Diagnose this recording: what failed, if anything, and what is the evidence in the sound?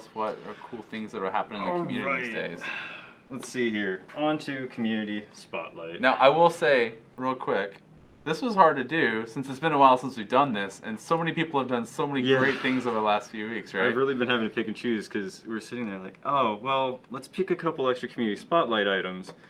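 Codec stage: comfort noise in place of the background at 7.97–8.25 s, likely from discontinuous transmission; the spectrogram shows a smooth, detail-free noise band at unchanged level.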